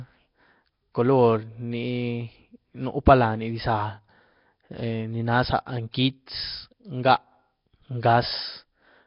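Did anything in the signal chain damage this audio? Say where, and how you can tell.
Yes. The damage happens at the codec stage. The speech carries a rough, hissy halo and a smeared, underwater quality from start to finish. Nothing is present above 5.3 kHz. This is heavy damage, and it points to low-bitrate Nellymoser compression, likely the Flash-era Nellymoser Asao codec at roughly 22 kbps. That codec codes short blocks with a fixed bit budget. Quiet bands get no bits and are filled with noise, which produces the hiss and the watery blur.

The same codec also leaves a pre-echo. From 5.91 to 5.94 s, a short hiss of about 28 ms comes before a sharp attack. The attack itself sounds soft rather than crisp. A transform codec spreads its coding noise across a whole block. Here the noise sized for the loud onset spills into the quiet moment just before it. That is why the hiss arrives before the sound that causes it.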